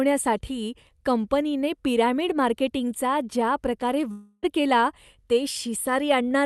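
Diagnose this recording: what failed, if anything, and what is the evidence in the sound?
From 4.11 s the speech turns into a buzzy, smeared continuation of its last sound, fading over about 0.31 s, with a brief gap of about 10 ms before speech resumes at 4.45 s. About 0.32 s of the utterance is gone, not delayed. This is the signature of a long network dropout, likely at the network stage. Packets stopped arriving, and the receiver's Opus concealment stretched the last decoded frame and faded it until real audio returned, with the top end capped near 12 kHz by the call codec.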